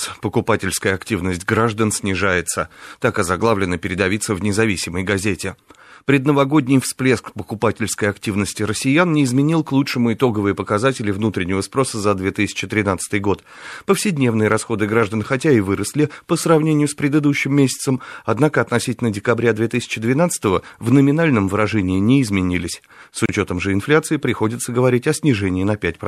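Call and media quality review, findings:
Gap at a join of encoded pieces, 23.26–23.29 s: separately encoded segments joined untrimmed, encoder delay and padding retained; 31 ms silence breaks the speech, which then resumes seamlessly.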